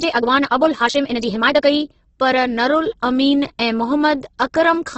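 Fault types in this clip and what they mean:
Opus compression: The whole clip carries heavy codec damage of the kind Opus leaves in its music mode. There is no content above about 8.1 kHz, so the top end is cut off. Band energy survives, but bands are filled by folding or noise rather than left empty. The speech therefore sounds grainy and rough, not swirly. This points to a very low bitrate, around 12 kbps, as the likely cause.
Time-stretched section: From the start to 1.76 s, the speech runs about 1.7 times faster than normal. The pitch does not rise with it. That pairing is the sign of stretching software, which likely squeezed this stretch to fit a shorter length. Short pieces of audio are dropped to keep the pitch steady. As a result the section sounds rushed. The pace changes abruptly at 1.76 s.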